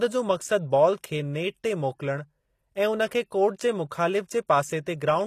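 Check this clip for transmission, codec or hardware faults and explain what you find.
One fault runs through the whole clip. The treble sounds synthetic, with gritty, lispy s sounds and nothing above 14.9 kHz. That points to HE-AAC compression, likely at a low bitrate around 24 kbps, where spectral band replication copies lower speech bands upward instead of coding the real highs.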